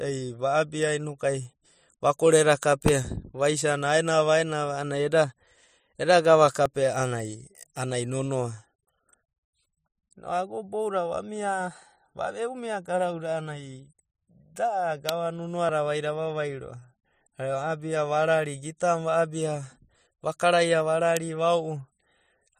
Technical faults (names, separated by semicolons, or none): electrical switching spike; dropped buffer (overrun)